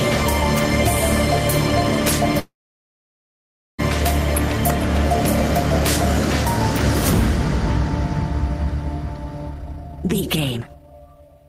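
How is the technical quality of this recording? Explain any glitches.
Two network-timing glitches affect the recording.

From 2.39 to 3.80 s, a call audio freeze: the last sound trails off briefly, then about 1.3 s of silence follows. The likely cause is delayed packets emptying the jitter buffer. The audio then resumes exactly where it stopped, so unlike a dropout, nothing is lost.

From 9.50 to 11.45 s, a jitter buffer speed-up: the receiver trims pitch-period slices to shed roughly a second and a half of backlog. The sound runs at 168% speed, hurried but at unchanged pitch, unlike a playback-rate error.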